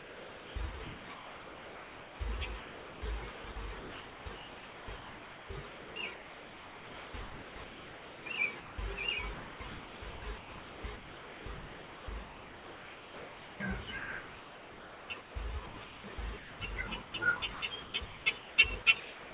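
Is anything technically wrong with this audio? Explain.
Yes, there are two faults, heard over a narrowband call path with nothing above 4 kHz, which fits a G.711-type codec.

A noise suppressor applied to music or sounds is active for the whole clip. Because it is tuned for speech, it treats sustained tones, ambience and reverb as noise and attenuates them. Onsets pass while held material and decays drop by about 5 dB, giving a pumping, thinned character.

From 0.00 to 8.78 s and from 9.34 to 19.34 s, the sound is chopped, likely by the sender's voice detector. Roughly 6.4 s and 6.5 s of those spans are replaced with comfort noise, so the audio cuts in and out.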